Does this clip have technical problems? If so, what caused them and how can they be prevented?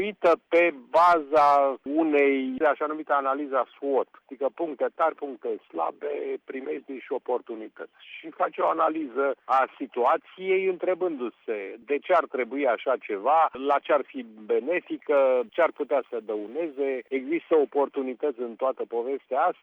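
Yes. From 15.17 to 17.17 s there's pre-emphasis left on: the CD 50/15 µs treble lift never got its matching de-emphasis, so 10 kHz sits about 8 dB hot against 1 kHz, leaving the sound thin, bright and sibilant. Honour the emphasis flag and apply de-emphasis on playback.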